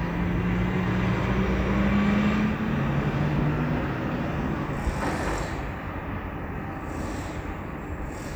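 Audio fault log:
Nothing stood out on listening to these sounds.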